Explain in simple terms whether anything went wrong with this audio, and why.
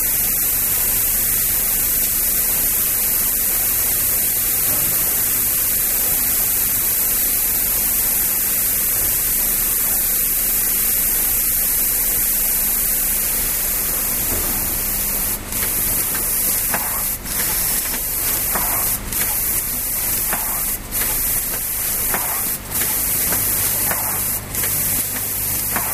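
Nothing went wrong here: the sounds in this recording come through steady throughout, with no audible technical problem anywhere.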